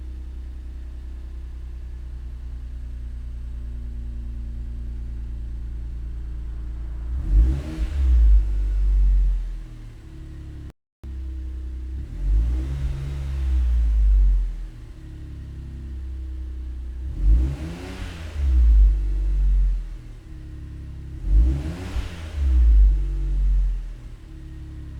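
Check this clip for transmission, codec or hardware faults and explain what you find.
One fault stands out: a playback stall from 10.70 to 11.04 s. The sound cuts off mid-flow and the output goes completely silent for about 334 ms before the audio picks up again. The likely cause is the player running short of data, or its output thread being held up, so nothing reached the output until it recovered. Unlike a packet-loss dropout, which usually leaves only brief gaps of a few tens of milliseconds, this is a single, clean, third-of-a-second hole.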